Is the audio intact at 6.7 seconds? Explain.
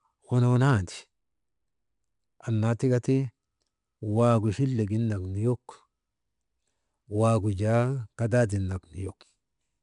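No. At 6.7 seconds, as across the whole clip, the speech passes through 4-bit ADPCM compression: each sample is coded as a small step from a predicted value, with the step size adapting as it goes, a rate that points to roughly 89 kbps. The coarse steps add a gritty, level-following hiss under the voice and roughen its sharper onsets, and nothing reaches above 10.6 kHz, which leaves the top end dulled.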